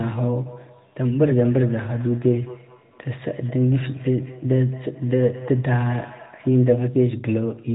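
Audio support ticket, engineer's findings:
Feedback echo between two devices, 0.46 to 6.94 s. Repeats every fifth of a second, peaking about 21 dB below speech. Second device's output re-entering the first mic, outside that canceller's reach. Band-limited to 3.8 kHz by the AMR-NB path.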